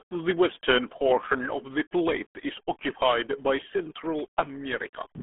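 Throughout, the speech has passed through the RealAudio 14.4 codec, a low-rate dial-up coder fitting about 8 kbit/s, leaving nothing above 3.8 kHz and a heavily muffled, gargly sound.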